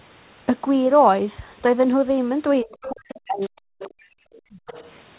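A speech recording, band-limited with nothing above 4 kHz, which points to narrowband telephone coding such as G.711. From 2.63 to 4.23 s there is speech suppressed in double talk: the talker's level dips, by as much as roughly 40 dB, across about one and a half seconds. This is likely an echo canceller turning everything down while both sides spoke, and it would appear on a waveform as chopped, collapsing envelope sections and on a spectrogram as dark vertical gaps through the speech harmonics. The other side's voice is leaking through at 3.40–3.49 s, 3.79–4.03 s and 4.38–4.91 s, a faint second voice some 20 to 25 dB below the main speech, probably residual loudspeaker echo the canceller failed to remove. On a spectrogram it would show as weak, broken harmonic traces that do not line up with the talker's. From 4.51 to 4.63 s the background is gated by the echo canceller: the room tone drops by about 34 dB, for roughly 70 ms in total, as the microphone is clamped down. 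This would look like a brief near-empty notch in the noise floor on a spectrogram, and a flattened stretch on the waveform.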